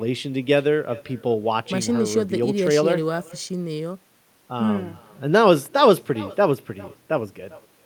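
From start to end, the speech carries an echo with no canceller. A quieter copy, about 21 dB down, trails each phrase by roughly 400 ms. It sounds thin.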